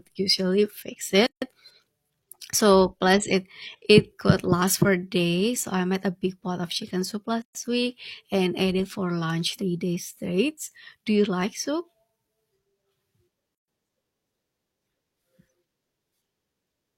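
Three short dropouts in this speech, at 1.27 to 1.42 s (about 154 ms), 7.42 to 7.55 s and 13.55 to 13.68 s (130 ms each), six seconds apart. Each is a gap at a join of encoded pieces: untrimmed encoder delay and last-frame padding leave a silence with smeared edges before the speech picks up where it stopped.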